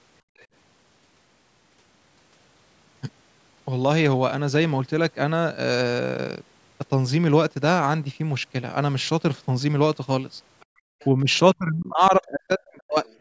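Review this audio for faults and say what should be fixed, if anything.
Background gated by the echo canceller shows up twice: 0.22 to 0.37 s, where the room sound drops by about 28 dB, and 10.66 to 10.95 s, dropping by about 34 dB. The canceller clamped the mic while its loudspeaker was playing. A gentler suppression setting or a slower gate release would keep the room tone steady.

The other side's voice leaks through in four short scraps: 0.37 to 0.46 s, 10.6 to 10.65 s, 10.99 to 11.06 s and 13.05 to 13.2 s. They sit roughly 30 to 35 dB under the speech, likely far-end audio that the canceller didn't fully remove. Better canceller convergence, or a headset, would stop this.

Speech suppressed in double talk, likely because the canceller couldn't separate the talker from loudspeaker echo and turned both down: a dip of around 5 dB at 11.23 to 11.27 s, then the voice pulled down by roughly 40 dB for 1.5 s, from 11.55 to 13.05 s. 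Better double-talk detection, or a headset, prevents it.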